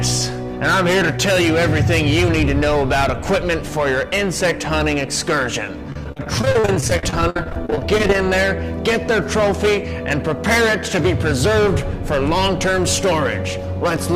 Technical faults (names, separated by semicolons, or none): repeated packet loss (robotic sound)